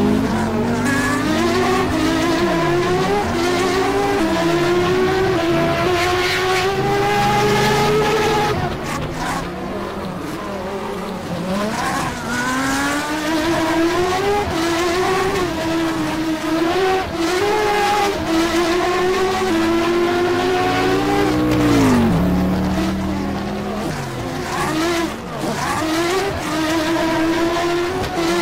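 At 1.30, 5.85, 12.08 and 17.51 to 17.53 s, damaged data in a compressed stream makes the decoder lose frame sync, producing brief glitches.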